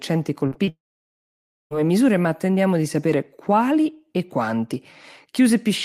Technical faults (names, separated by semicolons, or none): short concealed packet loss; long network dropout